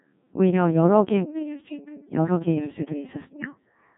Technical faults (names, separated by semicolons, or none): Codec 2 vocoder